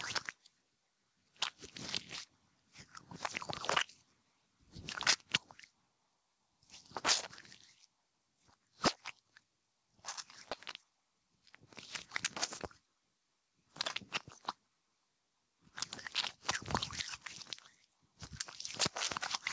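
Throughout the clip the level pumps, a swing of roughly 15 dB, leaving the sound squashed. This gain pumping likely comes from input gain set far too high, with a fast limiter clamping each peak.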